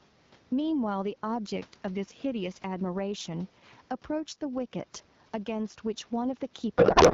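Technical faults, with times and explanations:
Throughout, gain pumping: the level is pulled down each time the speech gets loud, swinging by roughly 10 dB. This is likely the result of the input gain being set far too high and a fast limiter or compressor clamping it on every loud syllable. The effect is that quiet and loud passages sit much closer together in level, giving the speech a squashed, breathing quality.
6.78 to 7.14 s, codec payload misread: for the last part of the clip the speech turns into garbled noise and warble that barely tracks what is being said. The AMR-WB frames, packed in octet-aligned form, are being decoded as though they were bandwidth-efficient. The decoder therefore takes its fields from the wrong bit positions and synthesises nonsense from frames that still look valid. The damage continues to the end, because the two sides never return to a matching format.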